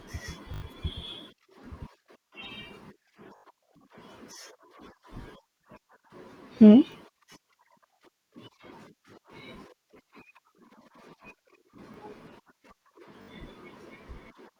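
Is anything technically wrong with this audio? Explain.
Yes. Repeated buffer faults occur at 0.54, 3.36, 5.22, 6.92, 11.94 and 13.22 s. New audio arrived late, so playback looped the last short block, which fits a 20 ms buffer. Each repeat joins hard. Longer events, around 0.54, 3.36 and 13.22 s, stutter for up to 80 ms. Shorter ones repeat a single 20 ms block once. Some speech is lost, roughly 70 ms at the longer ones.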